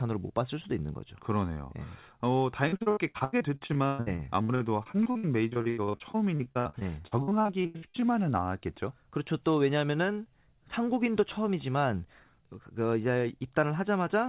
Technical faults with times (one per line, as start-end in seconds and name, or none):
2.68-8.04 repeated packet loss (robotic sound)